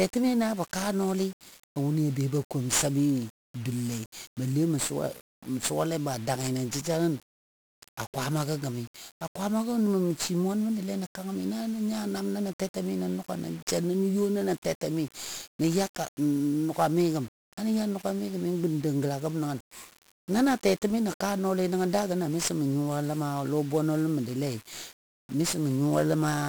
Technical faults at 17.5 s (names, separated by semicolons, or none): 1-bit DFPWM compression